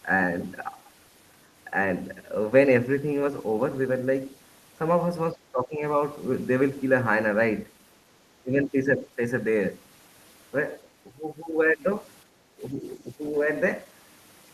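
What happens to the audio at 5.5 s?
An echo canceller likely ducked the talker along with the loudspeaker echo, so speech is suppressed in double talk from 5.33 to 5.82 s, dipping about 15 dB.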